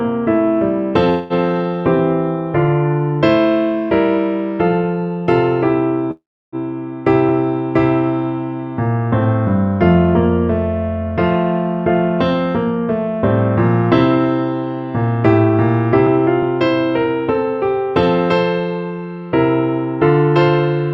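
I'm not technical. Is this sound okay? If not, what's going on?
No. There is a call audio freeze at 1.09 s and again at 6.11 s. The sound stalls and the last moment is stretched into a fading buzz: 0.21 s the first time, 0.41 s the second, mostly silent. Delayed network data is the likely cause. Afterwards the sound picks up where it stopped, so nothing is lost. It just runs later.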